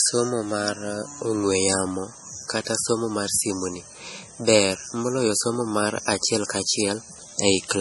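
Throughout, the audio was likely squeezed by MP3 compression at a very low bitrate, around 32 kbps. Starved of bits, the encoder removed everything above 11.5 kHz and let weak spectral detail flicker between frames, leaving the speech dull, watery and swirly, with smeared consonant attacks.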